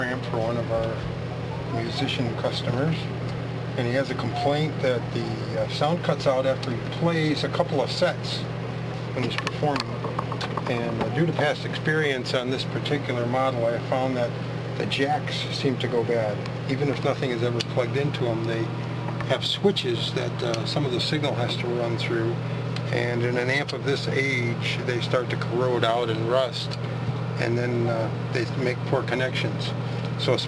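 No technical faults are audible anywhere in the recording.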